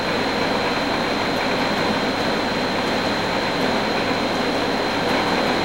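No technical faults can be heard anywhere in the audio; the signal stays continuous and stable throughout.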